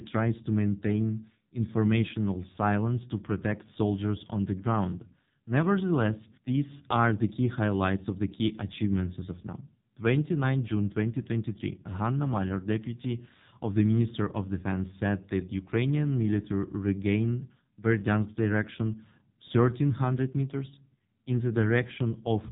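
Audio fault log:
Throughout: AMR narrowband mobile codec. The speech has been squeezed through the AMR-NB mobile coder, and the damage is heavy: nothing above 3.8 kHz survives, so sibilants and consonant detail are gone. The coder rebuilds each stretch from a vocal tract model fed by a pitch predictor and a handful of pulses, and at a low rate, which sounds like the 5.9 kbps mode, that sparse rebuild gives the voice a buzzy, synthetic quality.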